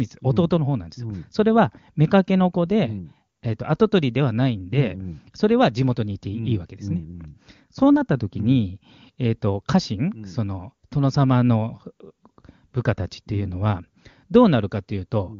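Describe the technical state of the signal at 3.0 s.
At 3.0 s the speech is intact, carried through the AMR wideband (HD Voice) codec at its top rate, which fits a 23.85 kbit/s stream, where its coding leaves at most faint traces on the sound.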